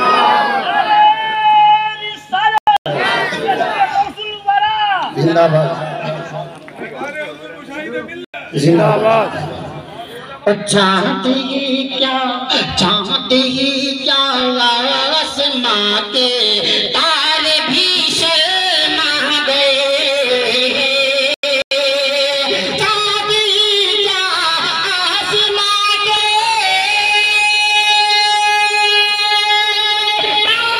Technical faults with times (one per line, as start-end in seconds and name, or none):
2.54-3.01 corrupt frame muted
3.90 corrupt FLAC frame
8.24-8.34 corrupt frame muted
14.40 corrupt FLAC frame
16.85 corrupt FLAC frame
17.93 corrupt FLAC frame
21.34-21.71 corrupt frame muted
26.17 corrupt FLAC frame